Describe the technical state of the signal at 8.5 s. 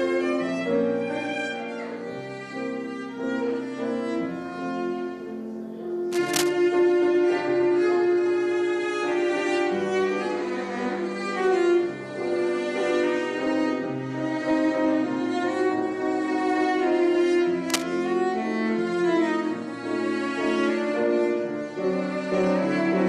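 At 8.5 s the signal is intact, with no audible fault at that point.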